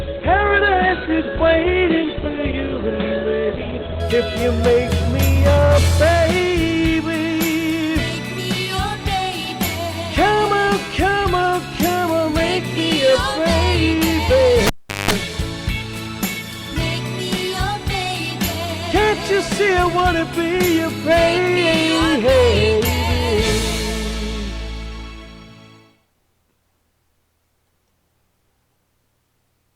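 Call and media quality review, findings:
Adaptive stream starting at a low bitrate, 0.0 to 4.0 s: player opens on a low-rate rendition before measuring bandwidth. Treble thin or synthetic, stronger codec smear, consistent with roughly 12 kbit/s Opus. Sudden step up at 4.0 s, gapless, to a fuller band reaching about 16.8 kHz.

Cable pulled and plugged in, 14.67 to 15.11 s: live connector pulled and reseated. Pop on disconnect, near silence for about 390 ms, including a 190 ms burst of 50 Hz mains buzz while only the plug tip makes contact, second pop as signal returns.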